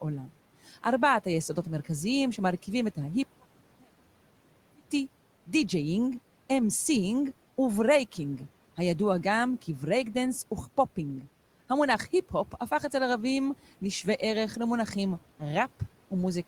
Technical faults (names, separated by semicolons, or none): one channel inverted